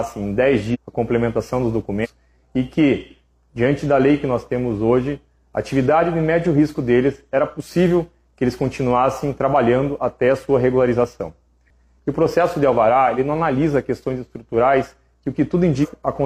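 Compressed frames skipped occur at 0.7, 2.0 and 15.8 s. Whole frames go unplayed, so the sound jumps ahead, about half a second first, then about a fifth of a second twice. The frames are 46.4 ms long.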